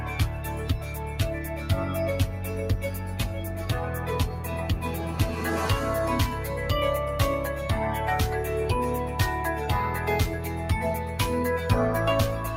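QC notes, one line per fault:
Throughout: noise suppressor applied to music or sounds. A speech-tuned suppressor treats sustained tones, ambience and tails as noise. Attacks pass, but held material is pulled down by roughly 5 dB. The level swings with each onset, so the sound pumps and thins.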